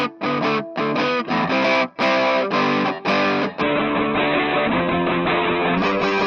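From 3.63 s to the end, a call bitrate drop turns the sound rough, watery and muffled, with nothing above 4 kHz, which fits the encoder falling from around 96 kbps to about 7 kbps. A plain low-pass filter would dull the sound without this coarse, watery grain.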